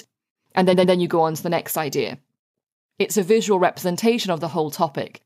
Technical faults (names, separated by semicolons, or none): repeated frames